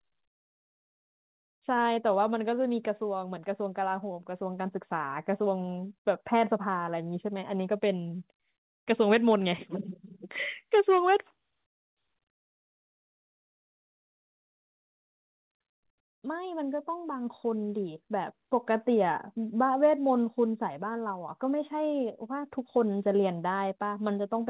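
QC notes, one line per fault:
One line: no fault to note.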